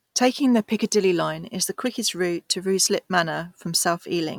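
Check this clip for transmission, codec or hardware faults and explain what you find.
One fault is present. Damaged data in a compressed stream at 1.86 s, between "is the" and "route to": corrupted frames throw the decoder out of sync, giving a brief glitch such as a chirp, squawk, click or short hole.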